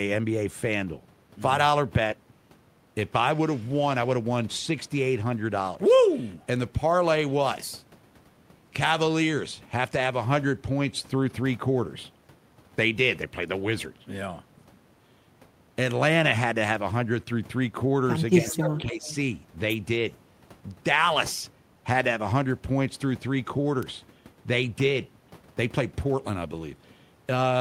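From 18.38 to 19.05 s the speech dips by roughly 10 dB, in pieces adding up to about half a second. This is speech suppressed in double talk, likely an echo canceller turning down its own talker along with the loudspeaker echo when both sides talked at once. Unlike a network dropout, the level is pulled down rather than lost outright. Within that stretch, from 18.49 to 18.79 s, and again just after it, from 19.06 to 19.15 s, there is an echo leak: a delayed copy trailing by 270 ms, about 15 dB and then about 20 dB below the speech. It likely comes from a loudspeaker whose echo the canceller failed to remove. The fixed delay sets it apart from room reverberation.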